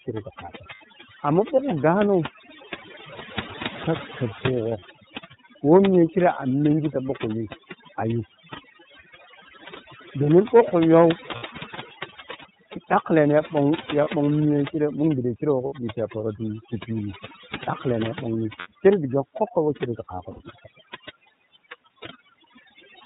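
From the start, overdone noise removal has pushed the background to near silence dotted with twinkling specks. Frequency bands near the noise estimate were cut hard, taking quiet speech detail with them. A spectrogram shows isolated flickering dots across an otherwise empty floor.

The whole clip also carries the iLBC codec. Its narrowband coding leaves nothing above 4 kHz, so a spectrogram shows a flat ceiling there. The speech is clear but plainly rough and synthetic, which fits iLBC's 13.33 kbps mode with 30 ms frames.

Lost iLBC frames then appear at 0.75 s (60 ms), 4.80 s (30 ms), 11.36 s (60 ms), 14.04 s (30 ms), 15.66 s (60 ms), 18.59 s (60 ms) and 20.31 s (90 ms). The decoder repeats the last pitch cycle mixed with noise, so each gap sounds like a briefly held, buzzy vowel. On a spectrogram these show as short stretches of copied harmonics, and on a waveform as a repeating cycle that fades over the 90 ms gap. 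Because each frame stands alone, the speech recovers almost immediately.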